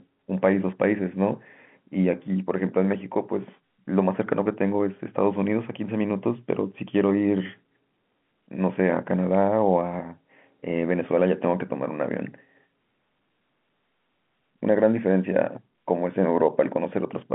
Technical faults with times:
none

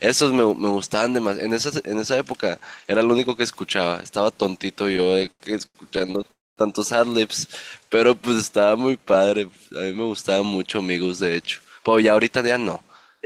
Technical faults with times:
4.93-6.31 repeated stalls (stutter)
6.31-6.59 call audio freeze
7.48-9.59 jitter buffer slow-down
11.46-13.21 jitter buffer speed-up

